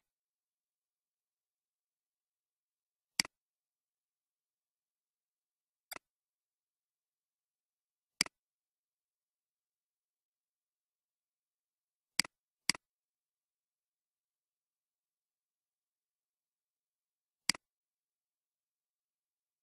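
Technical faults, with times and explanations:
5.87 to 5.93 s, damaged data in a compressed stream: for about 70 ms the decoder hits corrupted bytes, can't make sense of those frames and loses sync while it hunts for the next valid frame header, so you get a short glitch instead of clean audio.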